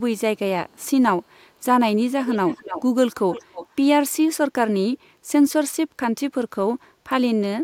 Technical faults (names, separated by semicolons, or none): echo leak